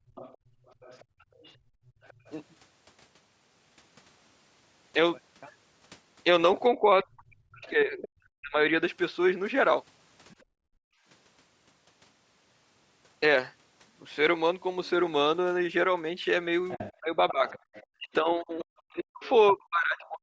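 Background gated by the echo canceller runs from 0.00 to 2.25 s. While the loudspeaker played, the canceller clamped the microphone, so the room sound dips by as much as about 26 dB across roughly a second and a half, then recovers once the canceller releases.

The other side's voice leaking through overlaps this, from 0.15 to 2.33 s. A second, faint voice sits about 25 dB under the talker, most likely loudspeaker sound that the canceller failed to fully subtract from the microphone.

Speech suppressed in double talk follows from 6.76 to 8.61 s. The talker's voice drops by around 40 dB in pieces, about a second in total. The likely cause is both sides speaking at once, leaving the canceller unable to tell the talker from the echo, so it pulled everything down.

Within that stretch, from 7.02 to 8.09 s, the leaking voice returns at about 20 dB below the talker. A brief scrap of it surfaces again from 10.29 to 10.43 s, about 35 dB down.

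Background gating hits again from 10.44 to 11.05 s, the room sound falling by up to about 37 dB for roughly 0.7 s.

From 16.70 to 20.08 s the other side leaks through strongly, only about 15 dB under the talker. Double-talk suppression runs from 17.0 s to the end, cutting the talker by around 40 dB in pieces totalling about two seconds.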